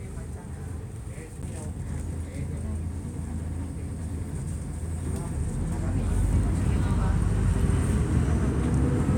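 A CD skip at 1.42 s: the laser jumped tracks on the disc's spiral, so a very brief muted tick is heard before the sound resumes from a different point.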